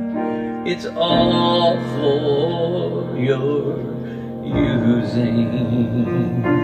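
Nothing is technically wrong with this audio.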